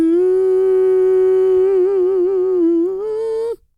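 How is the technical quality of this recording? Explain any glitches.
No technical faults are audible.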